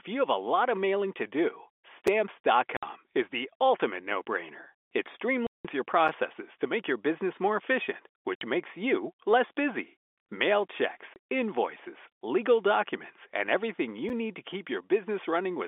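At 2.07 s a gap between chunks leaves a 6.5 ms silent hole. The sound is interrupted at a join, which fits 4 s chunks. No sound is lost, unlike the later dropouts. Packet loss filled with silence then cuts holes at 2.77 to 2.83 s (60 ms), 5.47 to 5.65 s (180 ms), 8.35 to 8.41 s (60 ms) and 11.14 to 11.16 s (20 ms). These holes are longer and remove sound, and all are multiples of 20 ms, which points to 20 ms packets. A second chunk gap at 14.09 s repeats the brief 6.5 ms break, all heard through the narrow 300 to 3500 Hz telephone band.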